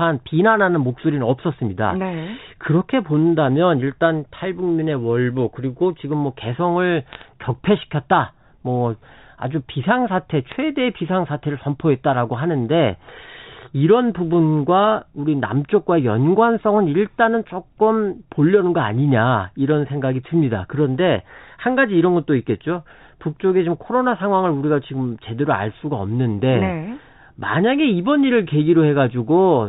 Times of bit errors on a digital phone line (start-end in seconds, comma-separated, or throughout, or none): 7.13-7.28, 10.49-10.60